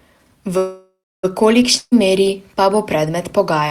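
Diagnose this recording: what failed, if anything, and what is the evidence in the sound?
The speech stops from 0.57 to 1.25 s: the last sound is held and fades, then about 280 ms of silence. It resumes where it left off, with nothing missing. This is a call audio freeze, likely a network delay that emptied the jitter buffer. The receiver extended the last sound to fill about 660 ms.

From 1.77 to 1.94 s a burst of packet loss occurs, again at the network stage. The receiver stretches the last sound and fades it over about 140 ms, with a brief silence. The speech then jumps ahead, and about 140 ms never arrives.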